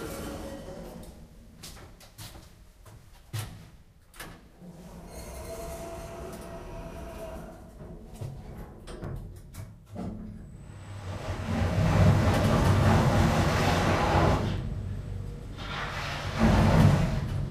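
At 9.04 s and again at 14.58 s you get a block of digital silence, each one only about 5 ms long. The samples in that stretch were zeroed, which fits the program missing its deadline to fill the output buffer. Because the audio drops straight to zero and jumps back with no fade, at this length the whole gap just comes across as a quick tick rather than an audible hole.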